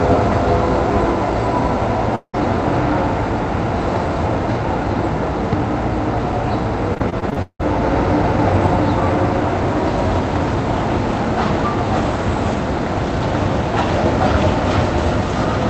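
At 2.15 s the audio cuts out for about 0.2 s, up to 2.35 s. What you hear first is the last bit of sound smeared onward as a fading buzz, and then roughly 70 ms of near-silence before things pick up again, with the middle simply gone. That pattern points to a long network dropout as the likely cause: nothing arrived, the receiver patched the hole by extending what it had, then gave up.

From 6.94 s to 7.64 s it turns choppy, which is repeated packet loss (robotic sound). There are 8 separate holes in that stretch, the longest around 174 ms, and together they eat about 300 ms. So a bit over 40% of the span is filled-in guesswork rather than real signal. Each gap gets the same extend-the-last-sound treatment, and because they come one after another, you get that stuttering, robotic texture with pieces missing. All of this rides on a call-codec path whose top end stops around 8 kHz.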